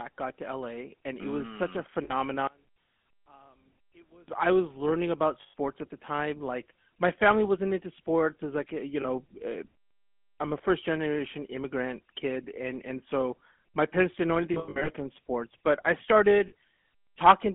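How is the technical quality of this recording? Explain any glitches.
The quality is poor: the whole clip is phone-grade speech with several dropouts and one stretch that nearly disappears.

GSM full-rate codec, throughout: the 13 kbps vocal-tract model and pulse excitation make the speech buzzy and gravelly. A spectrogram shows nothing above about 3.4 kHz.

Lost GSM frames, at 2.04–2.14 s, at 5.42–5.54 s (between "I was learning about" and "at the time"), at 9.02–9.05 s (after "was like eh you"), scattered over 14.54–14.90 s (longest run roughly 100 ms), and at 16.48–16.53 s: the decoder repeats the last good frame, which produces a metallic ring. A spectrogram shows smeared, repeated bands.

One channel inverted, 2.47–4.28 s, just before "I was learning about": the sound drops about 30 dB to a faint residue, likely from one channel's polarity cancelling the other in mono. The waveform visibly collapses.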